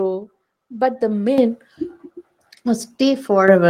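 A short speech recording with the microphone volume stepped up twice: at 1.38 s the whole signal jumps by about 9 dB, and at 3.48 s by about 6 dB more. Voice and background rise together, since the input gain was raised abruptly at the device.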